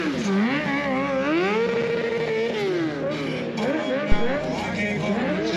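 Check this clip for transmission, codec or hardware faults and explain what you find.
One hardware fault. From 4.12 to 4.41 s there is a phantom power thump: a supply switched on a live input sends a voltage step through the coupling capacitors, producing a deep thump that peaks at about -6 dBFS and decays within about 66 ms.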